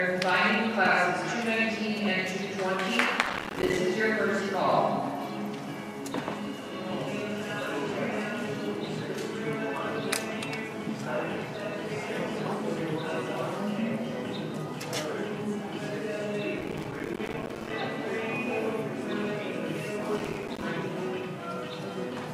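Processor overload crackle hits at 3.23–3.78 s, 16.59–17.73 s and 20.18–20.63 s. Dozens of buffers a few milliseconds long miss their deadlines and drop to silence, causing gritty tearing. The waveform shows many hard-edged gaps, and the spectrogram shows dense broadband vertical streaks.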